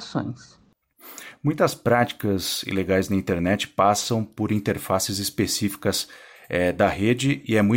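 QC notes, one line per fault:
No fault found in this speech clip.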